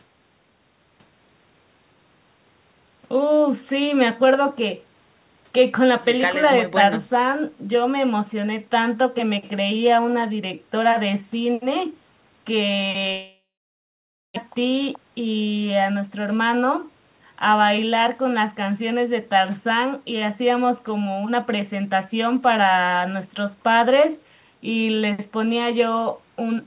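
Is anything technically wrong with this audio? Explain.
Yes, there are two related problems in the middle of the clip.

From 13.12 to 14.38 s there's what sounds like a long network dropout, most likely audio that never reached the receiver. The last bit of speech gets stretched into a fading buzz, then a bit under a second of near-silence. When speech resumes, about a second of it is simply gone, and the playback now sits roughly 200 ms further behind than before.

Right after that, from 14.48 to 16.56 s, you get a jitter buffer speed-up. The late audio piled up in the buffer, so the receiver trims out tiny pitch-period-sized slices, over and over, to catch up. The speech runs about 10% fast with the pitch unchanged, so it sounds a bit rushed until roughly 200 ms of backlog has been shaved off.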